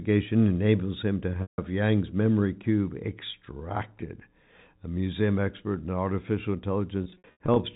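At 1.42 s, after "enables him to", packet loss with pitch repetition removes 160 ms, which fits eight 20 ms packets. The last pitch period is looped, so the sound hangs as a buzzy held tone fading out. From 7.04 to 7.56 s, after "museum expert in artificial", 240 ms goes in scattered gaps of up to 80 ms, each a brief buzz. Unlike plain dropouts, the gaps are bridged by a fading repeat rather than cutting straight to silence.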